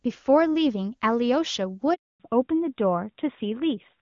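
A short bit of phone speech with a handover gap right in the middle. At 1.94 s the voice drops away within a few tens of milliseconds and stays silent until 2.20 s, a dead stretch of about 260 ms. That's what you hear when the call hops from one network to another and no speech frames get through during the switch, so whatever was said in that window is simply gone. Right after the gap comes a fallback to narrowband that lasts to the end of the clip. Before the switch the audio is full and airy, with the crisp top end of wideband HD Voice and little or no codec damage, which fits a high-rate AMR-WB mode around 23.85 kbit/s. From 2.20 s on, nothing above 4 kHz survives, and the voice goes duller and rougher, the classic old-style phone sound. That points to the call landing on an AMR narrowband codec, something like the 12.2 kbit/s mode, once the handover completed.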